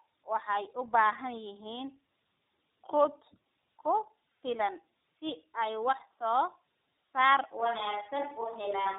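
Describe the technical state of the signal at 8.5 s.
The speech at 8.5 s has passed through tandem speech coding: it was compressed with AMR-NB at 12.2 kbit/s, carried over G.711 A-law, then compressed again with iLBC at 15.2 kbit/s. The second coder had to model a signal already stripped and smeared by the first, so their errors stack. The result is rough, warbling speech with nothing above 3.8 kHz, giving it a muffled, boxed-in telephone quality. This holds for the whole recording.

The moment also falls inside a switch to a distant microphone, which runs from 7.60 s to the end. The likely cause is that the close microphone's feed dropped out and a pickup further from the talker took over. The change is abrupt, and from then on the speech sounds hollow and roomy, with thinner low end. The level stays about the same, but a faint background noise now sits roughly 35 dB below the speech.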